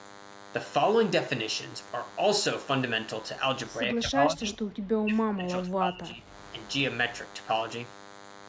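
A DECT cordless handset or base station near the recording equipment transmits a short radio burst every 10 ms, and the audio circuitry rectifies it into the signal. The result is a DECT cordless phone buzz that runs through the whole clip, a thin, steady 100 Hz buzz rich in harmonics, sitting about 20 dB below the speech.

From 3.94 to 6.32 s, the echo canceller was likely caught in double talk, unable to tell this talker apart from loudspeaker echo, so it turned the speech down. That is speech suppressed in double talk: for about two seconds the talker dips, thins and drops out in patches, falling by up to about 30 dB.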